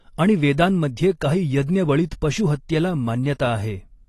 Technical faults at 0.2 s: AAC compression

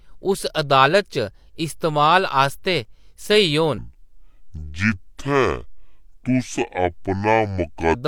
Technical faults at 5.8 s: section at the wrong speed

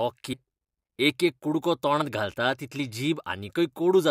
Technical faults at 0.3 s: damaged data in a compressed stream

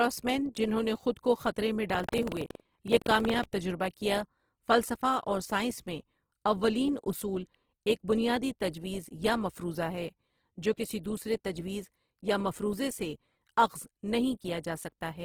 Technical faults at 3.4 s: Opus compression; buffer tearing

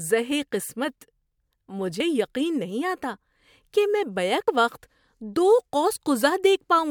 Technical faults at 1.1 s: none

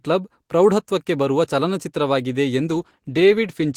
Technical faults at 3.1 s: call bitrate drop

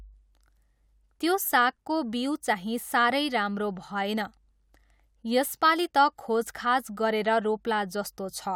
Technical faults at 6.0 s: none

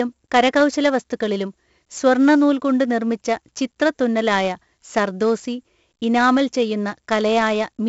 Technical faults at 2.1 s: 4-bit ADPCM compression

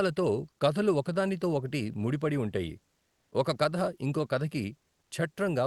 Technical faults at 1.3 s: none

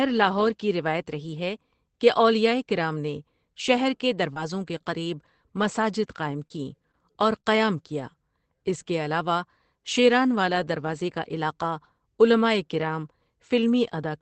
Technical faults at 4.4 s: short concealed packet loss; lost packet rebuilt from error correction

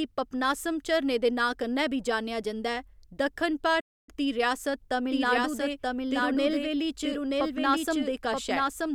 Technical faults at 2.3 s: none

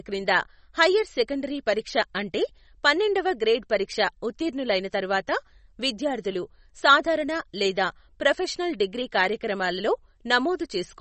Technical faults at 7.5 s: MP3 compression

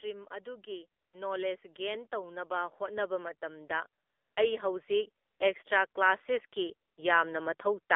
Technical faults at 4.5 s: AMR narrowband mobile codec; automatic gain rising

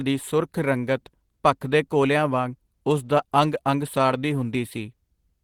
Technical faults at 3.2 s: none

